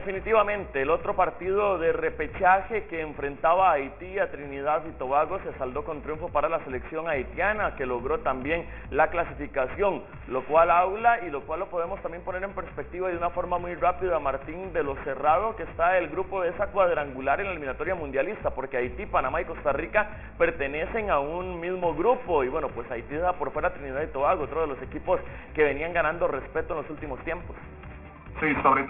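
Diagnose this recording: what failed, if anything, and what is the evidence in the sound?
Aliasing, present the whole way through, from a resampling step in the sample-rate conversion stage. Content above about 3 kHz folds back down as gritty, unrelated tones only about 15 dB under the signal. That fits a drop to roughly a 6 kHz rate with no anti-alias filter.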